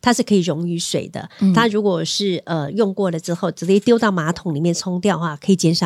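No technical faults are audible.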